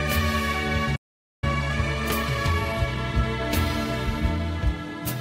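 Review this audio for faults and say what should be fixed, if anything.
A playback stall silences the sound from 0.95 to 1.44 s, roughly half a second, before it resumes; the likely cause is the player's buffer running dry or its audio thread being blocked. On a waveform this is a flat, empty gap; a spectrogram shows a blank vertical band.

Time-compressed catch-up follows from 1.44 to 4.44 s. The player trims and cross-fades small slices to recover the lost backlog, running about 1.1 times normal speed at unchanged pitch, so the sound seems hurried. On a spectrogram, events crowd closer together, with smearing at the splice points.

Both could be prevented by giving the player a larger jitter buffer and running its audio thread at a higher priority, so that it never runs short of data and has no backlog to squeeze.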